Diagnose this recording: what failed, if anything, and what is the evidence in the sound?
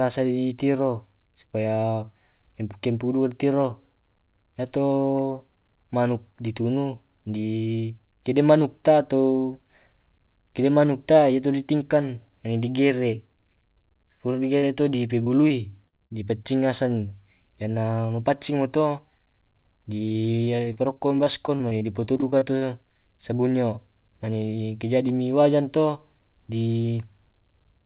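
Short concealed packet loss, network stage, at 14.58 s (about 40 ms, just before "to di"), then 15.24 s and 15.48 s (about 20 ms each, just after "to di"), 15.97 s (about 20 ms) and 16.06 s (about 40 ms). Each is a brief smear or wobble where a packet arrived too late. The receiver extended the preceding sound for that span and crossfaded back into the real stream, so a small piece of the speech is gone.

Burst of packet loss, network stage, from 15.88 to 15.95 s, inside the same cluster. Roughly 45 ms was synthesised. The concealment held the previous sound and let it decay, so a voiced sound becomes a held buzz and an unvoiced one a fading hiss. The speech then picks up again with about 40 ms of the original missing.

Repeated packet loss (robotic sound), network stage, from 20.08 to 22.63 s. Across these 2.5 seconds there are 19 separate holes, none longer than 40 ms. Together they account for about 0.44 s of lost audio, and about 16% of the stretch is concealment. 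Because each patch comes shortly after the last one, the speech turns choppy with pieces missing. The fault is in packet delivery, not in the G.711 A-law codec, which is band-limiting everything to 4 kHz as that codec does.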